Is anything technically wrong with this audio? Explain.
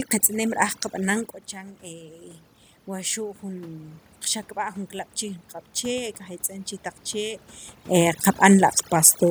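Yes. The clip is speech, and overdone noise removal runs through its whole length. The noise reduction was set too aggressively for the room noise it was fed, so any frequency band sitting near the estimated noise floor is pulled far down or switched off, and the quieter parts of the speech in those bands go with it. The background drops and breaks up into twinkling specks. The level shifts around 1 s and again near 8 s are the talker moving relative to the microphone.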